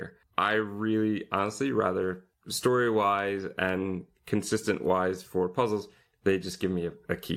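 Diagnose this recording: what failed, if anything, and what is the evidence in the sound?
Nothing in the speech stood out on listening that would point to a failure at any stage of the chain.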